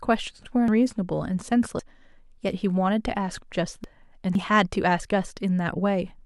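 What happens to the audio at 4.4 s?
At 4.35 s the speech jumps forward. About a tenth of a second of audio is missing, and the two sides are joined with no gap. This is likely a dropped buffer (overrun), where samples were overwritten before being read.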